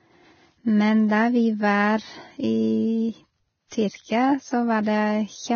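From the start, the whole speech clip carries heavy codec damage, and the likely culprit is Vorbis compression at a low setting. Nothing survives above about 6.6 kHz, so the top end is simply gone, and the treble that remains is quantised so coarsely that fine detail turns into a grainy hiss. Tones come out roughened and attacks lose their edge. All of that fits a bitrate somewhere around 17 kbps.

At 3.68 s there's a pre-echo lasting about 41 ms, up to 3.72 s. A sharp onset landed late in a transform block, and the codec spread that block's quantisation noise evenly across it. The noise that was sized for the loud attack also filled the quiet stretch just before it. You hear a brief smear of hiss leading into the onset, and the attack itself sounds soft instead of crisp.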